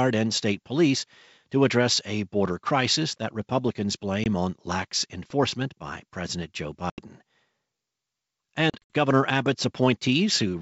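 Packet loss on an ADPCM call: a 20 ms silent gap at 4.24–4.27 s before "on lax enforcement by", then 80 ms at 6.90–7.01 s and scattered dropouts over 8.70–8.95 s. Each gap is followed by slightly distorted speech while the decoder's predictor resynchronises.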